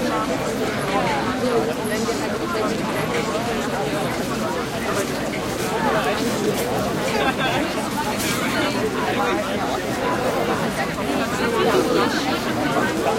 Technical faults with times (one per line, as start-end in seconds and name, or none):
none